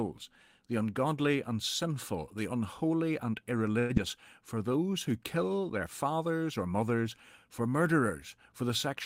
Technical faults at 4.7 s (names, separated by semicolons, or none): jitter buffer slow-down